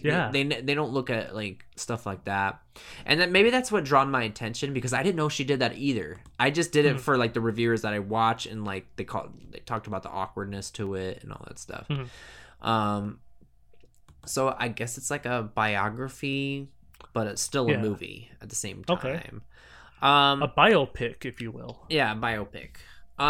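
From 1.03 to 22.9 s a click recurs every 1.09 s, likely clock drift buffer slips; a spectrogram shows evenly spaced thin vertical lines.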